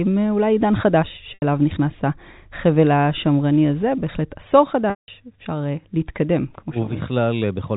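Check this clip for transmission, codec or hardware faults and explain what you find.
Two dropouts from packet loss with pitch repetition, at 1.34 to 1.42 s (80 ms) and 4.90 to 5.08 s (180 ms). The receiver bridges each gap by repeating the last pitch period. The first gap sounds like a brief buzzy hold. The longer second one fades to silence before the speech cross-fades back, all over a G.711 telephone-band channel.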